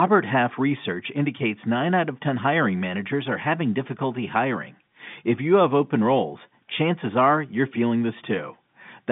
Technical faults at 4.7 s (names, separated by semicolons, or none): none